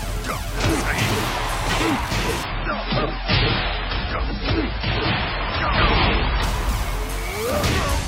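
At 2.43 s the sound drops abruptly to an adaptive stream at a lower bitrate and stays there for 4 s, until 6.43 s. The switch is instant and gapless: the player swapped to a cheaper rendition when throughput fell. Nothing is left above 5.5 kHz, so the top end goes dull, and coding artefacts thicken. The quality step points to an MP3 feed falling from around 128 kbit/s to roughly 16 kbit/s.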